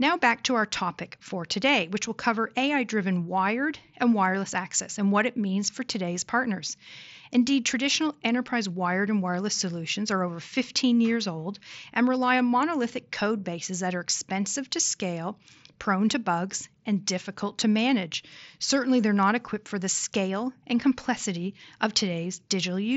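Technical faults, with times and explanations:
No technical faults heard.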